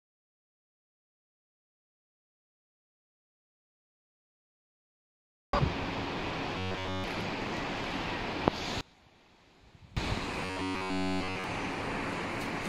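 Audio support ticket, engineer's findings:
Robotic sound from repeated short buffers, 6.58–7.04 s and 10.45–11.44 s. Rigid metallic buzz at 93.8 Hz. Likely buffer underrun in playback, last 10.7 ms block looped throughout. Spectrogram: evenly spaced harmonic stripes at 93.8 Hz multiples. Waveform: identical repeating cycles.

One channel inverted, 8.81–9.97 s. Sound collapses to a faint residue, about 26 dB down on mono sum. Likely polarity flip on one leg of the stereo path, common content cancelling. Waveform: sudden amplitude drop. Spectrogram: centre energy largely gone.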